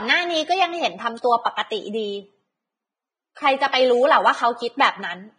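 Throughout the speech, a low-rate lossy encode, likely Vorbis compression at a bitrate around 20 kbps, has discarded everything above 9.7 kHz and quantised the remaining treble very coarsely, so fine detail turns into hiss and the voice sounds grainy, rough and dulled at the top.

From 3.35 to 3.37 s, pre-echo appears. A sharp attack fell late in a transform block, so quantisation noise sized for the loud onset spread into the quiet instant before it. About 20 ms of hiss runs ahead of the attack, which sounds smeared.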